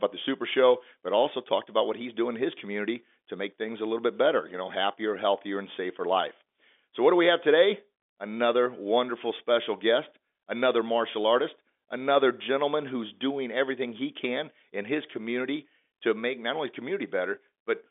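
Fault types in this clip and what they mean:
No faults are present; the speech is band-limited to a telephone line, with nothing above about 3.7 kHz.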